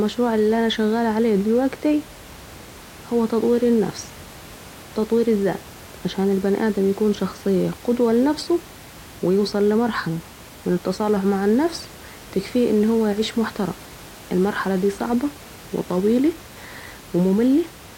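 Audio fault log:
No faults heard anywhere in this speech recording.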